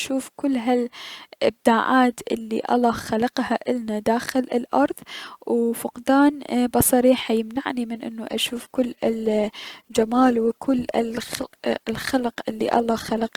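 It's a speech clip, and at 8.27 s it abruptly switches to an adaptive stream at a lower bitrate through to the end: codec artefacts climb with no gap, which fits the stream dropping from roughly 64 kbit/s Opus to about 16 kbit/s when the connection slowed.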